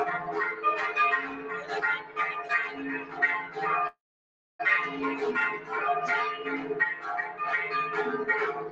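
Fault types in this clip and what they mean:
Noise suppressor applied to music or sounds: A suppressor built for speech stays active for the whole clip. It treats steady tones, ambience and decaying tails as noise and pulls them down. Sharp onsets pass through, but sustained parts sink. The level keeps swinging by about 10 dB as the suppressor engages and lets go. The result is pumping and a thinned, unsteady texture across the clip.
Sound cut by the noise suppressor: In three places the suppressor bites harder than usual on steady or fading sound. From 1.29 to 1.72 s the level drops by about 8 dB. From 1.99 to 2.18 s it falls by about 9 dB. From 2.99 to 3.20 s it drops by about 8 dB again. Each time the held sound sinks or its decay is cut short, while sudden sounds mostly come through.
Call audio freeze: At 3.87 s the audio stalls and resumes at 4.61 s. The last sound is stretched briefly, then about 0.62 s of near silence follows. 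When playback resumes it carries on from where it stopped. Nothing is lost, but a 0.72 s gap is inserted and everything after it runs late. The likely cause is delayed packets draining the call's jitter buffer.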